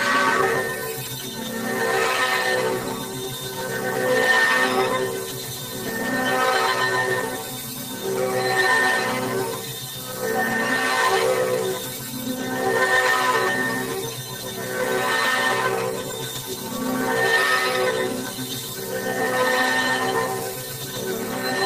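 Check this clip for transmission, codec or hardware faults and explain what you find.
No faults can be heard in this recording of sounds. There is nothing here that needs explaining.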